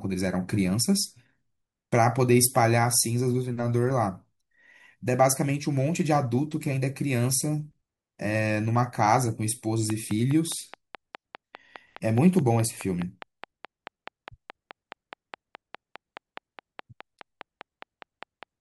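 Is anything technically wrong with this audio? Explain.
Yes. From 9.9 s to 18.44 s the speech is overlaid by a train of clicks: a steady ticking at about 4.8 clicks per second, evenly spaced, around forty in all, that carries through pauses and peaks a few decibels above the speech. The clicks share the same shape and arrive at a fixed pace, so the likely cause is a repeating electrical pulse from nearby equipment or a faulty connection or power supply.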